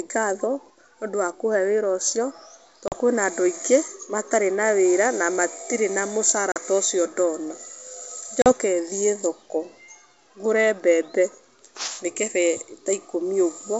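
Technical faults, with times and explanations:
2.88–2.95 s, 6.52–6.58 s, 8.42–8.52 s: packet loss on an ADPCM call. About 40 ms drops to silence each time. The decoder's predictor then mistracks, so speech resumes slightly distorted before settling.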